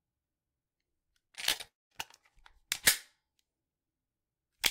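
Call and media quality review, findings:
Repeated packet loss (robotic sound), 1.27–1.95 s: choppy sound with pieces missing. Seven short gaps, longest 26 ms, each patched by stretching the previous audio; concealment covers about 15% of the span. Component: network jitter buffer / packet loss concealment. Spectrogram: repeated smeared vertical slices and flat, tonal bands where real detail should vary. Waveform: brief stretches of looped, self-similar cycles.

Long network dropout, 1.67–1.93 s: about 0.24 s of sound never arrives. A short fading buzz or hiss continues the last audio, then roughly 0.21 s of silence before playback resumes with the lost part skipped. Likely cause: network outage with concealment running out. Spectrogram: energy smears, decays, then a blank column. Waveform: tapering tail into a near-flat line, abrupt restart.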